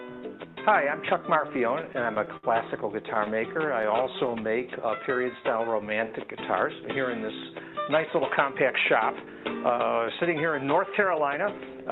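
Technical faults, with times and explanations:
1.47–2.45 s, repeated stalls (stutter): nine gaps, longest 64 ms, about 15% of the span filled by continuing the last sound; late packets drained the jitter buffer, so the audio drags and stutters.
3.03–4.62 s, scattered short gaps: around seven brief holes of roughly 10 ms each, patched by extending the preceding sound, giving small ticks and hiccups in otherwise clear audio.
3.29–6.47 s, jitter buffer slow-down: the receiver repeated pitch periods to rebuild its reserve, adding 263 ms; playback runs at 92% speed with unchanged pitch and drawn-out sounds.
8.36–8.71 s and 9.11–11.75 s, jitter buffer speed-up: an overfull buffer was trimmed by cutting short pitch-period segments, roughly 50 ms then 300 ms removed, at 110% and 109% speed with pitch unchanged, sounding hurried.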